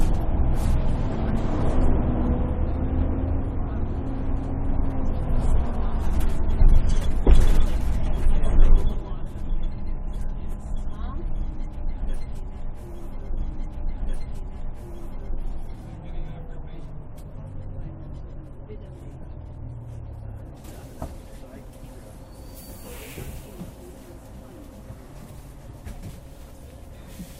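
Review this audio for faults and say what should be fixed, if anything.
A stream segment repeated at 13.36 s: about 2.0 s of the audio, running up to 15.36 s, plays a second time, with a small blip at the point where playback jumps back. The player fetched or queued the same segment twice, so the timeline gains roughly 2 s and the material in that window is heard twice in succession. To prevent it, the player should track segment sequence numbers and discard any segment it has already buffered before queuing it for playback.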